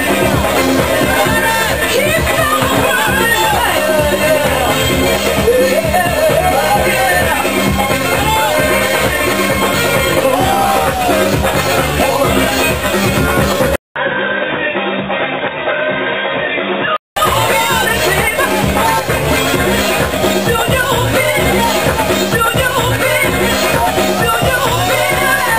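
From 13.76 to 17.16 s, after a 200 ms waveform gap, sound turns dull, spectrogram empty above 3.8 kHz: likely input switched to a poorer device.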